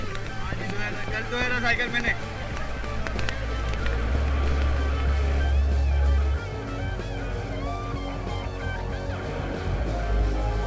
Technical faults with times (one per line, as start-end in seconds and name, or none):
none